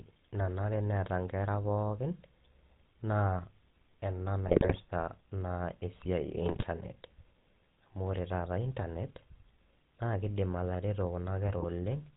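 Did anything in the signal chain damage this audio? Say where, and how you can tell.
Yes. Throughout, the speech has a buzzy, gravelly roughness and nothing above 4 kHz. That points to the codec stage, specifically the GSM full-rate codec at 13 kbps, which rebuilds speech from a vocal-tract filter driven by coarse, regularly spaced pulses.

Brief squawks, pops and gargling break in at 4.48 to 4.79 s, 6.46 to 6.65 s and 11.48 to 11.66 s. These are GSM bit errors on the network link, where corrupted filter, pitch or gain values distort the spectrum or level for each affected frame.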